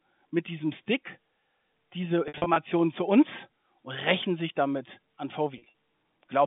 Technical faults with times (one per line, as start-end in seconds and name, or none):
2.28-2.56 packet loss with pitch repetition
5.58-5.73 packet loss with pitch repetition